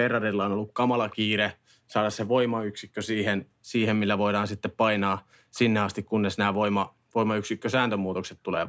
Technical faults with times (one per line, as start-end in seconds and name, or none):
1.10-1.16 echo leak
1.89-1.93 echo leak
5.54-5.60 echo leak